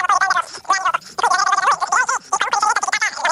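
A wrong sample rate affects the whole clip. The audio runs three times too fast, and its pitch sits about 19 semitones high. Speed and pitch shift together by the same ratio, with no conversion between rates. A threefold jump fits material captured at 16 kHz being played out at 48 kHz. Everything sounds squeaky and rushed from start to finish. No part of the clip plays at its natural rate.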